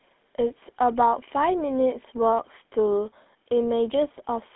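From start to finish the speech carries plainly audible GSM full-rate codec damage: a buzzy, gravelly roughness from its pulse-driven vocal-tract model, which fits the 13 kbps full-rate mode. The band sits around 200 Hz to 3.6 kHz, with nothing above 3.8 kHz.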